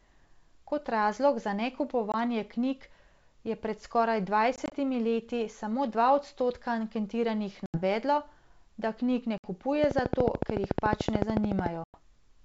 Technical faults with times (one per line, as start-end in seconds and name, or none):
2.12-2.15 packet loss on an ADPCM call
4.56-4.73 packet loss on an ADPCM call
7.66-7.78 packet loss on an ADPCM call
9.38-9.47 packet loss on an ADPCM call
9.84-11.67 train of clicks
11.84-11.98 packet loss on an ADPCM call